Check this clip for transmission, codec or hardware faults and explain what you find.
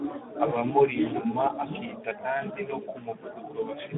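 The clip carries one fault, running from start to finish: Speex codec damage, clearly audible. The speech is held to a telephone band of about 200 Hz to 3.5 kHz, with nothing above about 3.8 kHz. At roughly 11 kbps the CELP coder has too few bits to model the excitation accurately, so the voice sounds noisy and hoarse. A spectrogram shows a hard ceiling near 3.8 kHz and smeared, grainy harmonics beneath it.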